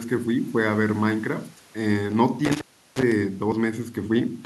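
At 2.45 s the speech runs into an intermittent contact fault. The trouble lasts until about 3.12 s. Somewhere in the chain a loose plug or cable lost its connection for a moment. The line stays open for about 351 ms in all. The sound drops out abruptly, and crackle marks the edges as the contact breaks and remakes. While the line is open, only a faint hiss remains in place of the speech.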